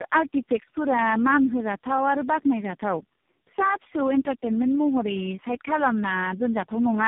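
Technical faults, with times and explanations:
Throughout: tandem speech coding. The speech sounds rough, muffled and warbly, with nothing above 3.7 kHz. The call appears to have been decoded and re-encoded several times as it passed between networks. Each low-rate coder then modelled the previous coder's output, errors included, so the distortions compound instead of staying at one codec's level. The combined character fits a chain of about four speech codecs with AMR-NB among them, harsher than any single link would produce.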